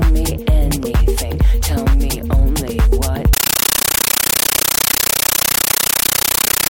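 Compressed stream played as audio, from 3.33 s to the end: at that point the sound gives way to harsh, chattering static. A Dolby Digital (AC-3) bitstream is reaching the output as if it were ordinary PCM samples, with nothing decoding it. Each coded frame plays as a 13.3 ms burst of noise followed by silent padding, repeating 31.25 times a second. That burst pattern fits a 640 kbps AC-3 stream.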